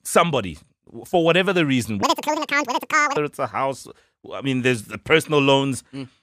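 Audio read two samples at a time (double speed) runs from 2.03 to 3.16 s: pairs of samples were taken as single frames, so the speech plays twice as fast and 12 semitones higher.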